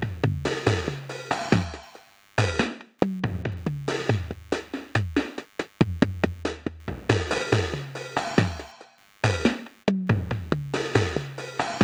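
From start to finish there's computer activity noise sitting under the sound: a faint buzzy, chirpy texture pulsing at around a hundred times a second, roughly 35 dB below the material. It's coming from the machine, not the recording. As the processor, graphics card or mouse shift their load, the ground shared with the audio circuit wobbles, and that leaks in. You can tell because it follows the computer's activity rather than anything in the sound itself.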